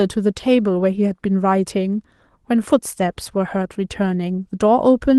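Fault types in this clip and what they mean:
No technical faults are audible.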